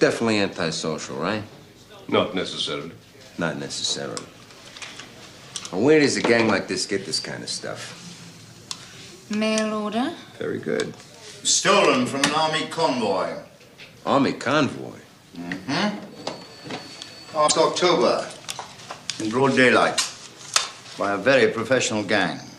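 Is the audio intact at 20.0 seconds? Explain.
No. From about 19.97 to 20.00 s the audio jumps ahead and the following fraction of a second comes out damaged, lasting roughly one 26 ms frame. This is likely a broken MP3 bit reservoir: frames were lost, so the next frame reached back into the reservoir and decoded another frame's bytes. Unlike a simple dropout, which leaves a clean gap, this damage spans about one frame and comes with a forward skip.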